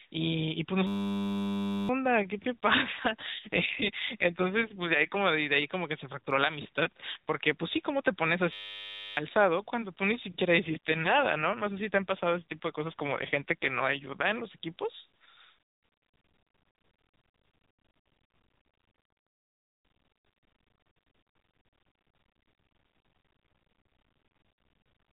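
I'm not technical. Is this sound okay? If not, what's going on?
No. At 0.87 to 1.89 s and 8.53 to 9.17 s there's a system hang loop: the computer froze and replayed a tiny slice over and over, making a steady buzz and losing about a second and then most of a second of audio.

From 3.0 to 5.2 s and 10.6 to 14.3 s you'll hear an AMR rate drop: the phone link weakened, so the voice turns rougher and more robotic until the signal recovers.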